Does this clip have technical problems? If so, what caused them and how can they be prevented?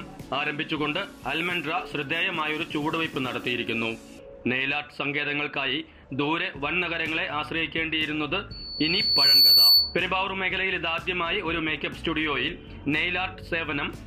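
Yes. A loudspeaker feedback squeal runs from 8.51 s to 9.98 s: a single tone at 4.5 kHz swells over roughly a second until it sits around 10 dB above the rest of the sound. The microphone is picking up the loudspeaker it feeds, and at 4.5 kHz the loop gain exceeds one, so that frequency reinforces itself on every pass. It can be prevented by lowering the gain, keeping the microphone out of the loudspeaker's coverage, or notching 4.5 kHz.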